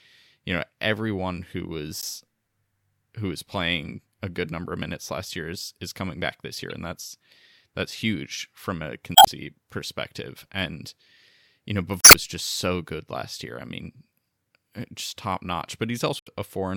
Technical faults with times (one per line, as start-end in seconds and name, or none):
2.01-2.04 damaged data in a compressed stream
6.70-6.72 damaged data in a compressed stream
9.13-9.28 damaged data in a compressed stream
12.01-12.15 damaged data in a compressed stream
16.18-16.28 damaged data in a compressed stream